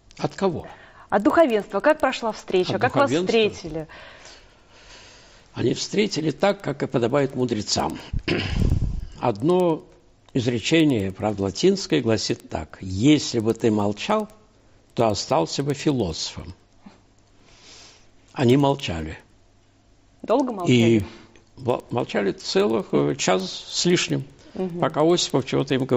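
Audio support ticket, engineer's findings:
Regular ticks at 10 per second, throughout, present only while signal is playing and gone in silence. Probable component: sample-rate converter, resampler restarted on every block. Each 100 ms block is converted in isolation, so the filter sees silence or the block's far end instead of real neighbours, leaving a small error at every edge. Fits a 16 kHz to 48 kHz upsampling stage. Unlike buffer underruns, there are no gaps and no lost audio, and the spacing is perfectly even.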